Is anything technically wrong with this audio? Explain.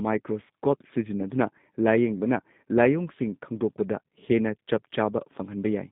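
Yes. G.729 codec coding runs throughout: the speech is rebuilt from a vocal tract filter, pitch predictor and sparse pulses in 10 ms frames, which fits an 8 kbit/s G.729A coder. Band limits of 150 Hz and 3.7 kHz leave it muffled, with a plainly rough, synthetic grain.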